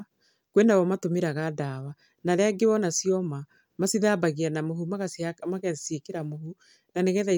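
No technical faults can be heard anywhere in the recording.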